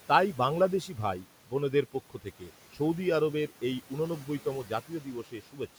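Noise suppressor artifacts run through the whole recording. The suppressor pulls steady background down by about 12 dB, frame by frame, so the residual room noise, about 19 dB under the speech, dips between phrases and swells beneath them.

Speech cut by the noise suppressor occurs from 2.1 to 2.51 s, right after "বাংলাদেশী ভাই বোনদের পক্ষ", and again from 5.24 to 5.6 s. Each time the suppressor mistakes quieter speech for noise and drops it by up to about 11 dB and 10 dB. Roughly a tenth of a second in each span sounds swallowed and faint.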